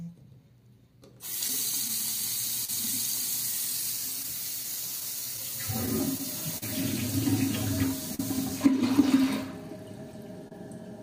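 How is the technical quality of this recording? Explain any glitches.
The recording has network timing trouble: it stutters at uneven moments all the way through, with two busier patches and two distinct stalls near the end.

The whole clip shows clock drift between sender and receiver. The sending side's clock runs slow, by something like 3 percent. The jitter buffer keeps draining faster than it refills, so the receiver has to stretch or repeat little bits to keep going. You hear that as small, irregular timing hiccups scattered across the full length rather than one clean fault.

There are scattered short gaps in two stretches. From 1.48 to 2.69 s there are roughly three of them, adding up to around 50 ms of patched audio. From 3.81 to 6.63 s there are about seven, totalling around 100 ms. None is longer than about 40 ms. These packets arrived late or not at all, and the receiver papered over each hole by carrying the last bit of sound forward. 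Nothing actually drops out, but you get brief ticks and smeary little blips.

There is a short stall from a late packet at 8.15 s, holding for 41 ms, and another at 10.48 s, holding for 29 ms. Each time the packet wasn't there when it was due, so the buffer ran dry. The receiver held the last sound until the packet showed up, then picked up exactly where it left off. Nothing is lost, but the sound hangs a touch too long, with a faint buzz or dip.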